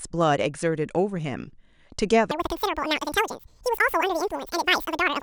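From 2.31 s to the end, the speech turns high and hurried, a full octave up at double speed: a wrong sample rate, audio recorded near 22 kHz played back at 44.1 kHz.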